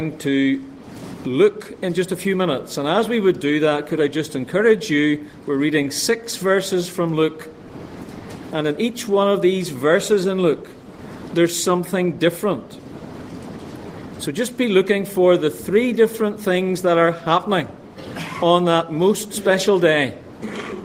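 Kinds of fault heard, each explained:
No kinds of fault are heard in this audio.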